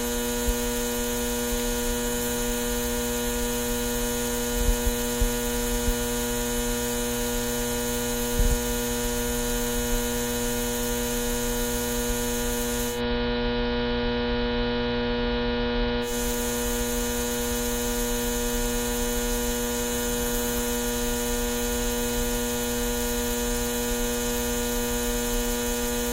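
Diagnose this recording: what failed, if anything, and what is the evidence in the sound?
The failure is at the broadcast receiver: digital radio blending to analogue. At 12.88 s a 134 ms cross-fade drops the sound onto the AM feed. The level shifts by about 2 dB, and hiss sits around 30 dB down until it blends back at 16.14 s.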